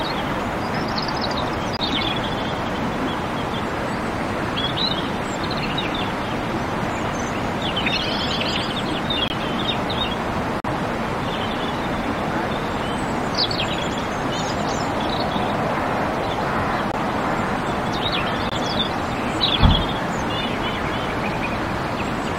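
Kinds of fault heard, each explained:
Corrupt frame muted: damaged compressed frames were rejected by the decoder and replaced with silence, so the sound drops out abruptly and resumes without any shift in timing. Gaps occur at 1.77–1.81 s, 9.28–9.32 s, 10.60–10.67 s, 16.92–16.95 s and 18.46–18.53 s, each roughly 36 to 72 ms. On a waveform each is a sudden flat line. On a spectrogram it is a clean vertical blank stripe across all frequencies.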